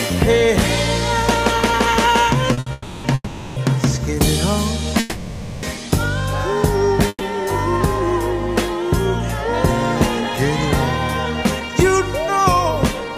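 At 2.53 s and again at 2.59 s the sound hangs for a moment, held on one spot with a faint buzzy edge, first for 40 ms and then for 70 ms, before carrying on from where it left off. These are short stalls from a late packet. Each time the next packet was not there when due, the jitter buffer emptied, and the receiver stretched the last bit of sound to fill the wait. Nothing is lost, but the timing drifts later.

Longer holds follow, each a continued buzz or hiss that fades before the sound resumes intact. They occur at 2.72 to 3.06 s, 3.14 to 3.58 s, 5.00 to 5.65 s and 7.09 to 7.23 s. The second and fourth decay into about 30 ms of silence before picking up. These call audio freezes, lasting about 0.3, 0.4, 0.6 and 0.1 s, were likely caused by packets held up in transit, leaving the receiver nothing to play but an extrapolation of the last sound.

From 11.6 s to 13.16 s the audio runs slightly fast, about 4% fast, with the pitch unchanged. 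This is a jitter buffer speed-up. After the earlier delays the buffer held more audio than it targets, so the receiver trimmed short pitch-period-sized pieces over and over, removing roughly 70 ms in total to bring the latency back down.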